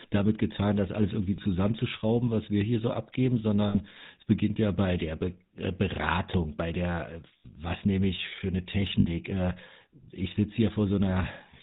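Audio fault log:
throughout: GSM full-rate codec. The speech has a buzzy, gravelly roughness and no content above 4 kHz, consistent with 13 kbps full-rate coding. The vocal tract is modelled and excited by evenly spaced pulses that keep only every third excitation sample, so the grain is plainly audible.
1.36 to 1.39 s, 3.68 to 3.76 s, 7.38 to 7.45 s, 9.00 to 9.10 s: lost GSM frames. The sound briefly freezes into a rough, metallic ring. Each damaged frame is filled by repeating the last good frame's parameters. The first gap fits one 20 ms frame, the others about three.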